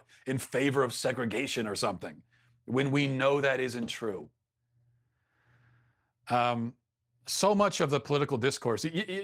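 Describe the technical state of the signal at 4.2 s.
At 4.2 s, just after "we know that isn't", a lost packet rebuilt from error correction spans 4.11 to 4.25 s. The receiver played a low-bitrate copy carried in the following packets, so there is no gap or fade-out as with packet-loss concealment, only briefly rougher, noisier sound.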